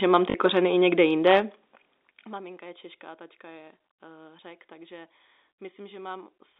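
A short robotic stutter and a brief buzz at 0.30 to 0.34 s, just before "kořeny i někde jinde", is packet loss with the last packet repeated. About 40 ms of audio went missing, which fits two lost 20 ms packets, and the receiver replayed the previous packet.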